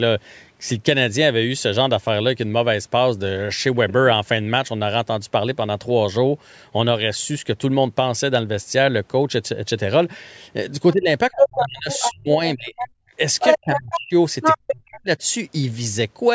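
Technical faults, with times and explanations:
10.93–13.1 s, 14.56–15.21 s and 13.61–14.13 s: speech suppressed in double talk. The likely cause is that the echo canceller heard the far side on the loudspeaker while this side was talking and, unable to tell the local talker from the echo, turned both down. The speech is pulled down for about 1.5 s in total in the first stretch, with the deepest drop around 35 dB. In the later two stretches it is pulled down for about 0.5 s and 0.4 s, each reaching around 40 dB down, so the speech sinks far under its normal level in pieces.
11.39–12.13 s, 12.77–12.88 s, 13.39–14.0 s and 14.42–14.75 s: other side's voice leaking through. The far side, played on this device's loudspeaker, was likely not fully removed from the microphone by the echo canceller, so a second voice comes through in scraps. In the first, third and fourth scraps it sits around 5 dB above the local speech. 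The short scrap near 12.8 s is around 10 dB below it.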